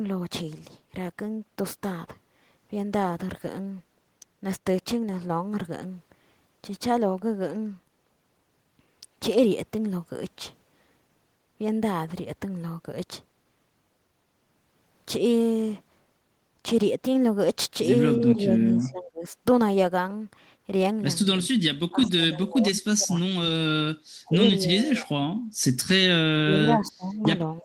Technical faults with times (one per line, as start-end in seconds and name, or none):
18.18-19.35 speech suppressed in double talk
21.42-21.54 speech suppressed in double talk
21.90-23.44 speech suppressed in double talk
24.23-25.17 speech suppressed in double talk
26.36-27.64 speech suppressed in double talk